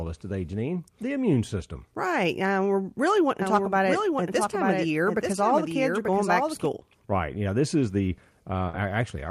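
From 3.42 to 6.66 s, just after "uh we're really", a doubled audio track appears: a second full-band copy trails about a second behind, a few dB quieter, starting and stopping abruptly with no decay or room colour, unlike acoustic echo. It is likely caused by a slower second capture path.

At 8.69 to 8.75 s, after "this is the", short concealed packet loss leaves a brief smear where 40 ms of audio never arrived and was synthesised from the preceding sound. It is a filled gap, not silence, which sets it apart from a plain dropout.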